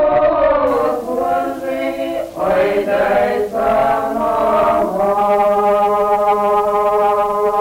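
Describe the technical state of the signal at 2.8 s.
At 2.8 s the sound is grainy, with error roughly 30 dB below the signal, from 0.67 s to the end: low bit depth without dither, likely coarse 6-bit rounding.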